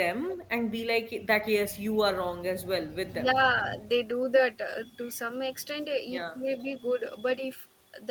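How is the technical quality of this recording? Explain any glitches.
The recording has three brief glitches of two kinds, each pointing to echo-cancellation trouble in a call.

Echo leak, from 0.29 to 0.36 s and again from 6.6 to 6.64 s. A faint delayed copy of the speech appears about 420 ms behind the original, roughly 20 dB below it in the first instance and around 30 dB below in the second. This is likely a loudspeaker-to-microphone path the echo canceller failed to fully cancel, so fragments of the returned signal slipped back into the line.

Speech suppressed in double talk, from 3.2 to 3.37 s. The speech level dips by up to about 10 dB for roughly a tenth of a second in total, giving a brief pulled-back quality. The likely cause is both sides talking at once: the echo canceller could not tell the local talker from loudspeaker echo and attenuated everything it picked up.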